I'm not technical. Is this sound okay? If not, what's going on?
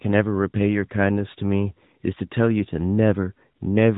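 No. From start to finish the speech has been squeezed through the AMR narrowband mobile codec, the old phone-call format. Everything above 3.8 kHz is gone, and the damage is plainly audible as a buzzy, synthetic edge, unlike a simple muffled recording, which stays natural.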